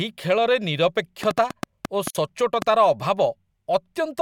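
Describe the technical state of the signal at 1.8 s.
At 1.8 s you're inside a train of clicks running 1.23 to 2.63 s: roughly seven uneven pops, about 5.2 per second, likely interference, jutting about 15 dB above the speech.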